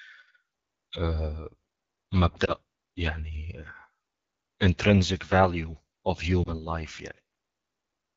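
Throughout, the AMR wideband (HD Voice) codec is plainly audible, with raspy, rough speech that fits its low 8.85 kbit/s mode; a spectrogram shows smeared harmonics and noise-like energy above 6.4 kHz. Lost AMR speech frames cause brief warbling dips at 2.45 to 2.51 s and 6.44 to 6.59 s, each pointing to a single lost frame concealed with fading gain; the waveform briefly shrinks there.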